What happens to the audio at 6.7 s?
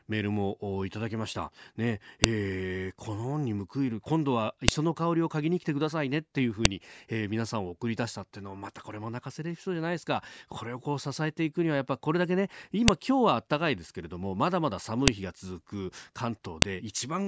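Right around 6.65 s there's a sharp, loud click, just a snap lasting a few milliseconds. That's a file header played as audio. It sounds like two WAV pieces of this speech were joined or streamed together without stripping the second one's header, so those few dozen bytes of metadata get read as sample values. They bear no relation to the waveform around them, which is why you get that abrupt jump regardless of what the speech is doing.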